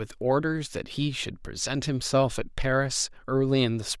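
No technical faults can be heard anywhere in the recording. There is no event here that needs a time or an explanation.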